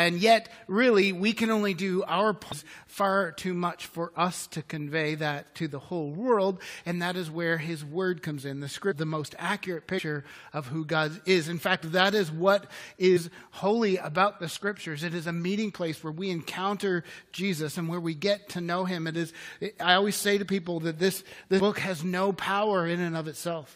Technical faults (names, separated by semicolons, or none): damaged data in a compressed stream